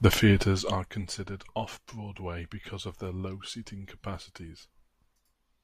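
No technical faults can be heard anywhere in this recording.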